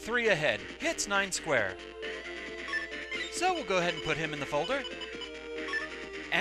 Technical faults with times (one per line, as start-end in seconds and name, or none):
0.18-6.32 clock slip clicks